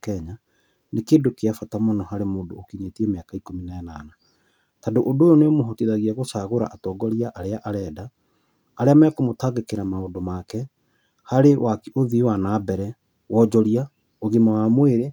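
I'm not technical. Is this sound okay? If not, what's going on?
Yes, it's fine: nothing in this recording sounds broken, glitchy or out of place, so there's nothing to worry about.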